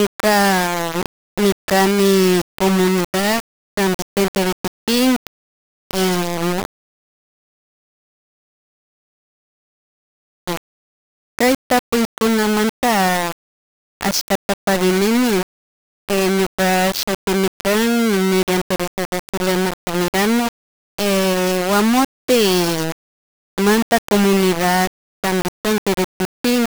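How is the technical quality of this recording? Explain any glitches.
The technical quality is poor: a coarse, grainy distortion runs through the entire speech recording. Throughout the clip, the audio sounds harsh and gritty, with the error riding on the voice rather than sitting as a steady hiss. This is likely low bit depth without dither. The roughness fits about a 3-bit quantiser with plain rounding, leaving the error only about 10 dB below the signal. Quiet tails collapse to silence or sputter between neighbouring steps. On a waveform the signal appears as a staircase of a few flat levels. A spectrogram shows broadband grit that appears and vanishes with the speech.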